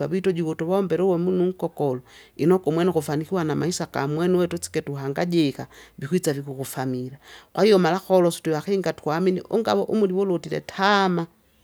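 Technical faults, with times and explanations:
No technical faults can be heard in this speech.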